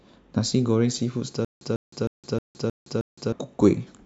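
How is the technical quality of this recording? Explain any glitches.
The recording has one glitch, a stutter with silent gaps from 1.45 to 3.32 s. A 148 ms speech burst repeats six times, each followed by 165 ms of dead silence, with a 313 ms period. This likely comes from a stalled stream replaying its last fragment. On a spectrogram, identical blocks alternate with blank columns.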